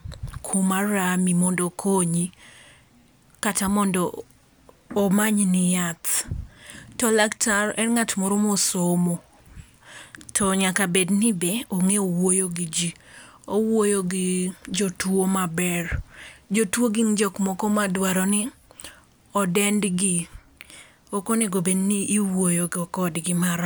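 Nothing in this bit of speech stands out as a technical fault, so there's nothing to flag at any point along the way.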